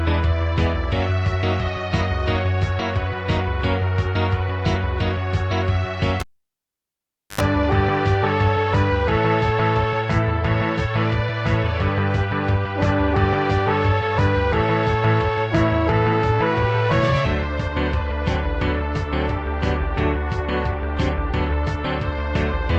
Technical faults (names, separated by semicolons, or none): cable pulled and plugged in